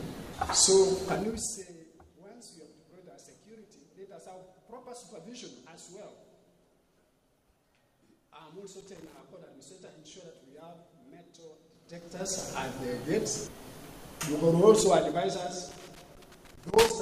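From 1.12 to 1.77 s a fast ticking rides on the sound as it drops by roughly 25 dB. This is zipper noise. The level falls in 3 dB steps, about fifteen a second, with no smoothing between them, so every jump leaves a small click. The same zipping returns from 11.70 to 12.45 s as the level climbs by roughly 25 dB at about ten steps a second. It comes back from 14.77 to 15.23 s, more slowly at around seven steps a second, during a dip of roughly 10 dB.

Between 8.80 and 9.19 s an irregular burst of scratchy crackle cuts across the audio. A longer burst runs from 15.69 to 16.90 s. This is loose connector crackle: a worn or dirty contact is rapidly making and breaking, chopping the signal into fragments. Any DC on the line turns each break into a pop.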